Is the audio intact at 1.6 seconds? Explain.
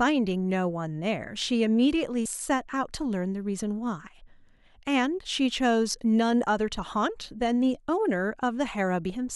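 Yes, at 1.6 seconds the speech plays through cleanly, with no dropout, click, distortion or other fault.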